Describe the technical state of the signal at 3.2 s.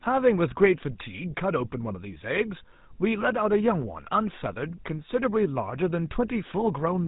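At 3.2 s the speech has a buzzy, gravelly roughness and sounds dull, with nothing above about 3.8 kHz. This is GSM full-rate codec damage, present throughout the clip: the codec models the vocal tract and excites it with regularly spaced pulses, which fits a 13 kbit/s stream.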